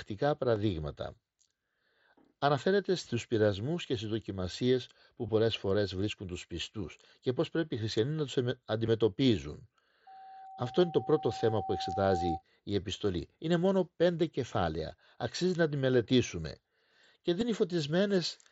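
Concealed Bluetooth headset packet loss occurs at 0.55 s, at 5.27 s between "και στις δοκιμασίες που" and "πολλές φορές βρίσκουν τους", and at 8.86 s after "οι χριστιανοί να τους". Each time, headset audio went missing for 7.5 to 15 ms and the receiver patched the gap by repeating a closely matching stretch of the preceding waveform, so the single lost packet at 0.55 s is nearly hidden, while the two-packet runs at 5.27 and 8.86 s come through as a brief buzzy tone.

Loudspeaker feedback squeal runs from 10.07 to 12.43 s, ending just before "η επιστολή". The microphone picked up its own loudspeaker, and at 767 Hz the loop gain passed one, so a pure tone swells over about two seconds until it sits roughly level with the speech. Within the squeal, at 11.69 s, a longer 37.5 ms packet loss is concealed with a held, buzzy repeat and a slight warble as real audio resumes. One more brief 7.5 ms concealed loss follows at 17.40 s, heard against the wideband mSBC headset sound.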